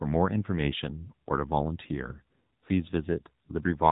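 From start to finish the speech runs through an AMR narrowband mobile codec, the old 2G/3G phone path, and the damage is plainly audible. Everything above about 3.8 kHz is simply gone, so consonants lose their edge and the whole thing sounds boxed in. The codec rebuilds the voice from a vocal-tract model and a handful of pulses, and at this bit budget it comes out buzzy and synthetic, which fits a low AMR-NB mode of around 7.4 kbps.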